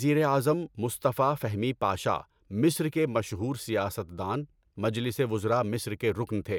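No technical faults can be heard anywhere in the speech. There is nothing to place on a timeline, as no event stands out at any point in the recording.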